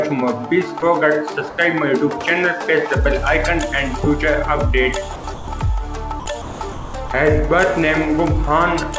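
The sender's voice detector likely misjudged parts of the sound as background and stopped transmitting, so the receiver filled those gaps with comfort noise. This sound dropped by the voice detector is heard as brief switches to steady noise at 0.80 s, 1.50–1.58 s, 5.16–5.24 s, 5.34–5.48 s, 6.20–6.26 s, 6.42–6.60 s, 6.72–6.94 s and 7.08 s. The dropouts cluster between 5 and 7 s, and the longest lasts 220 ms. Throughout, the audio is band-limited at 8 kHz, which fits a G.722 call path.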